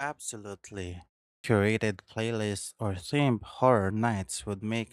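At 1.38 s the speech comes back from a pause of about 0.37 s with a clipped start after a pause. Roughly 60 ms is missing, up to 1.44 s, because the output stage dropped into a low-power state during the silence and needed that long to wake and lock again. The word begins abruptly, without its first sound. On a waveform the trace jumps from flat silence straight into the speech with no onset ramp. A spectrogram shows a hard vertical edge where the opening sound's energy should be.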